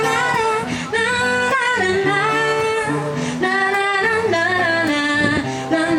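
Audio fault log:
Nothing stood out as a fault on listening.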